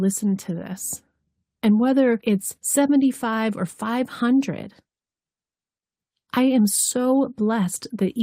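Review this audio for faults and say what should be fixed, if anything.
No faults can be heard in this speech recording. Nothing needs to be fixed.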